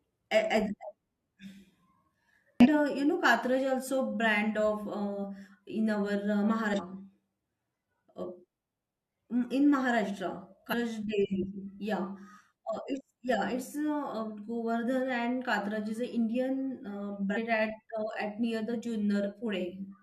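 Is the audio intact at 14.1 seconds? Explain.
Yes, the speech at 14.1 seconds is intact, with no dropout, click, distortion or other fault at that moment.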